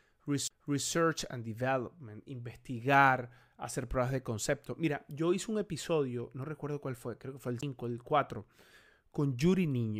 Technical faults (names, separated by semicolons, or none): CD skip